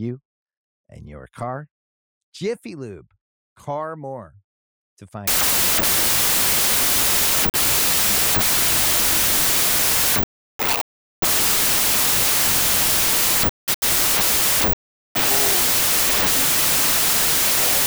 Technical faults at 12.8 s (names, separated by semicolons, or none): wrong sample width